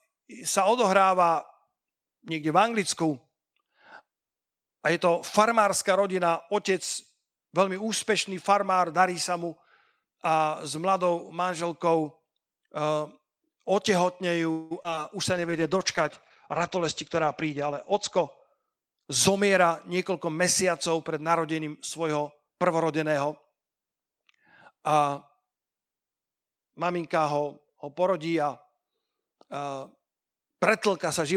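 From 14.51 to 14.99 s the speech breaks up with repeated packet loss, heard as a robotic sound. Four gaps open in that half second, the longest about 193 ms. Each is patched by stretching the last bit of sound forward. Nearly half the span is concealed this way, about 234 ms in all. Some 80 ms is simply gone. The result is choppy and clipped.

From 15.31 to 15.61 s comes a jitter buffer slow-down. The receiver had too little audio stored. It rebuilt its reserve by repeating single pitch periods. It added about 35 ms over that short stretch. Speech runs at 90 percent speed with the pitch unchanged. Sounds come out slightly drawn out. There may be a faint warble in that moment.

A call bitrate drop starts at 15.34 s and lasts until 19.32 s. The bandwidth estimate fell, so the encoder went from 40 kbps down to 12 kbps. It sat at the lowest rate for about 2.8 s. Audio bandwidth shrank from 20 kHz to 8 kHz. 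The speech turns muffled, with the upper sibilance gone. Coarser coding adds a rough, watery texture until the rate climbs back.

From 16.60 to 19.71 s there is a jitter buffer speed-up. The buffer now held more than its target. The receiver trimmed short pieces of one or a few pitch periods, many times over. Roughly a fifth of a second is removed across the stretch. Speech runs at about 106 percent speed, pitch intact. It sounds slightly hurried, overlapping the muffled low-bitrate stretch.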